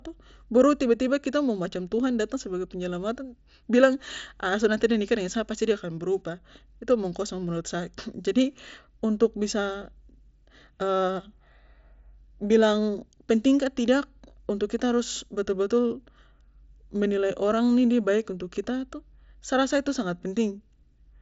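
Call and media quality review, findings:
No faults found in this speech clip; the Bluetooth mSBC headset path passes audio up to about 7.7 kHz with nothing above that, as the wideband headset codec allows.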